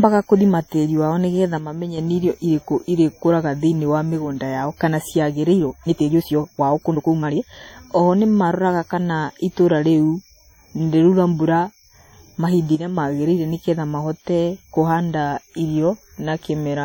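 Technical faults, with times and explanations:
Throughout: WMA compression, likely from a heavy 32 kbps encode; the speech rings and washes, with hiss swelling and receding alongside the signal.
1.58–1.98 s, 12.75–12.98 s: one channel drops out, likely a lost stereo side; level falls abruptly by about 6 dB, after "nĩgetha" and before "magĩrĩire nĩgetha mahote".
5.52–7.68 s: time-stretched section, likely software squeezing the audio to fit; after "wa mĩgũnda yao kana" speech runs 1.62 times faster, rushed, pitch unchanged.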